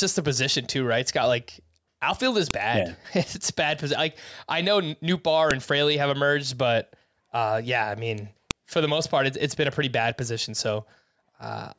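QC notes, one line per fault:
2.51 s, 5.51 s and 8.51 s: file header played as audio. A sharp, loud click lands right after "like outfield is", again at 5.51 s, and between "uh yeah I mean" and "for the most part", exactly 3.0 s apart. Each joined piece kept its header, whose bytes are played as a burst of samples unrelated to the speech. On the waveform each shows as a near-instant spike, and on a spectrogram as a thin vertical broadband line.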